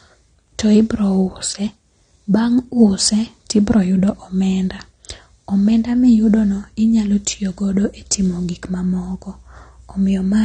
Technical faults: AAC compression

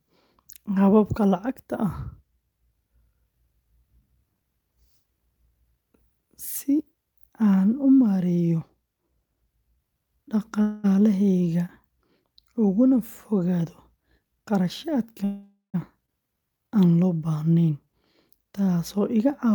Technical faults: call audio freeze; jitter buffer speed-up; skip ahead; jitter buffer slow-down

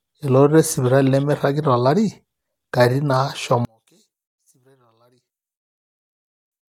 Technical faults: one channel inverted

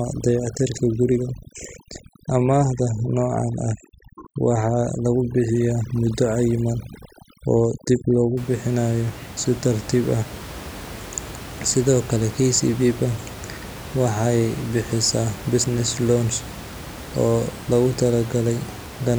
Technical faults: overdone noise removal

